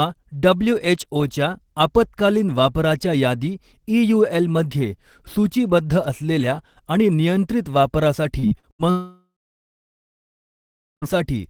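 A speech recording turns choppy from 8.39 to 8.82 s. Pieces drop out and are replaced by a smeared, robotic continuation of the preceding sound. This is repeated packet loss (robotic sound): four separate gaps, the longest 79 ms, together taking about 0.2 s of audio. The receiver filled each hole by stretching the last sound it had, and those patches make up nearly half of that short span. At 8.91 s the audio gives way to a fading buzz or hiss, then goes quiet for about 1.7 s. Speech resumes at 11.05 s with about 2.1 s of material simply gone. This is most likely a long network dropout, in which nothing arrived for that stretch. The receiver briefly extended the last sound before settling into silence, and the missing audio never returned.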